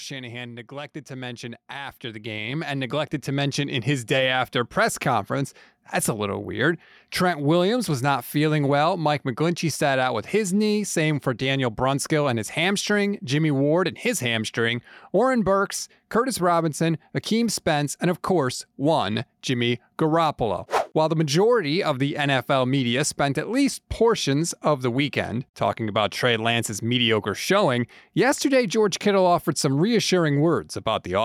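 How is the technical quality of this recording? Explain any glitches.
The opening four seconds carry two level faults from automatic gain control; the gain settles by the time "day after press conference" arrives.

From 0.05 to 0.74 s there is automatic gain falling. The AGC judged the input too loud and eased its gain down by about 3 dB, so the speech and its background sink together across that short stretch.

From 0.68 to 3.97 s, automatic gain rising follows. The AGC now read the input as too quiet and pushed gain up by about 13 dB over roughly three seconds, so voice and room noise swell together until the level steadies.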